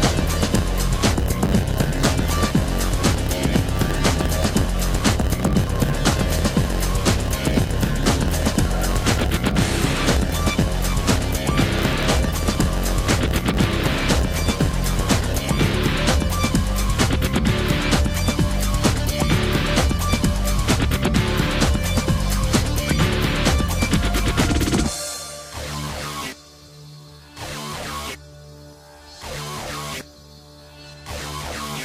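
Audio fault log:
0.0–15.74 s, block size mismatch (padded): one stage hands over blocks slightly shorter than the next stage reads, so each block ends in a short run of zeros, roughly 8% of its length. Those silent slivers recur 91.9 times a second, laying a steady buzz at 91.9 Hz over the sound. Because every block is lengthened with padding, the audio plays at 0.919 times its proper speed while keeping about its normal pitch.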